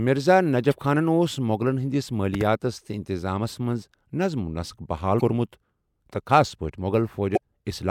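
At about 0.69 to 0.73 s, just before "خانَن اوس", there's a short glitch from damaged data in a compressed stream. A stretch of the coded speech got corrupted, so the decoder lost sync and hunted for the next good frame. Around 2.34 to 2.43 s, right before "تہٕ انتظامیَس منٛز", you get a loud pop, actually two quick ones, roughly ten decibels above the speech. That's likely a voltage spike from a plug, switch or static discharge landing on top while the talking carries on. The same compressed-stream damage returns at 5.17 to 5.21 s, ahead of "کوٚرمُت تہٕ خاص", and again at 7.33 to 7.38 s, each a brief glitch where the decoder resyncs.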